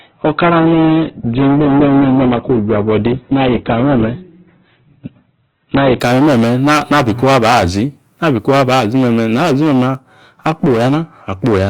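Adaptive stream starting at a low bitrate, from 0.0 to 6.0 s: the player opened on a cheap, fast-loading version of the stream and switched up after gauging the connection. For those first six seconds the speech has nothing above about 4.2 kHz and sounds dull and smeared, which fits a very low-rate Opus encode near 8 kbit/s. At 6.0 s the treble and clarity return abruptly, consistent with a step to around 64 kbit/s, with no gap.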